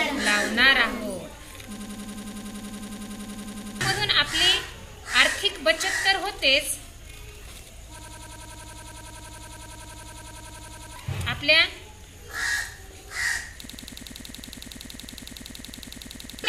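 The audio breaks into a system hang loop three times, from 1.77 to 3.81 s, 7.99 to 10.96 s and 13.65 to 16.44 s. Each time a 92.9 ms fragment repeats exactly at 10.8 Hz, giving a machine-gun stutter, which fits a 4096-sample ring buffer that the hardware kept replaying while the computer or driver froze. New audio stops during each loop, so about 2 s, 3 s and 3 s of sound are lost.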